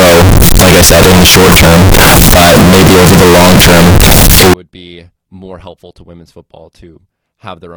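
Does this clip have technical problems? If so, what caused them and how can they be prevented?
Yes. Float read as integer affects the speech from 0.0 to 4.5 s, ending just before "be more helpful to". The sound is blasted into a harsh, near-square wave at an almost fixed, high level, with background noise as loud as the speech. The likely cause is 32-bit float samples being read as 32-bit integers, so sign and exponent bits set the level. Prevent it by declaring and checking the sample format at every read and write.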